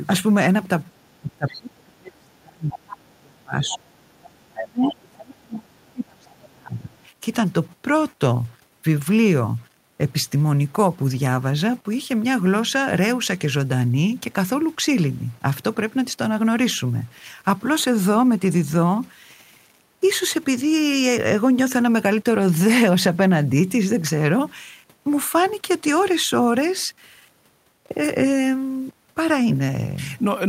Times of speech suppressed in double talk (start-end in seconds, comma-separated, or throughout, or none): 1.21-4.00, 4.33-6.96